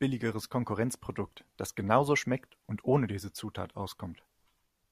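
Nothing in the speech signal points to a technical fault at any point, so there is no fault to place in time or explain.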